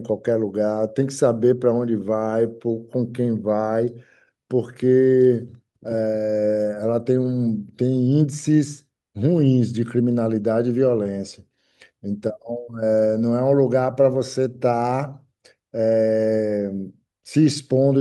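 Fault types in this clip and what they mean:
Nothing stood out on listening to the speech; no fault could be heard at any point.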